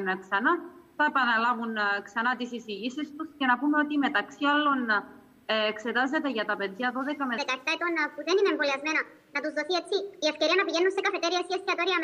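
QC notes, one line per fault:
7.38–12.04 s, section at the wrong speed: from 7.38 s to the end the audio abruptly turns hurried and bright, running 1.37 times too fast, with pitch raised by about five semitones in step with the tempo. Because speed and pitch shift together rather than independently, the cause is likely a playback or editing stage running this part against the wrong clock, reading samples faster than they were captured.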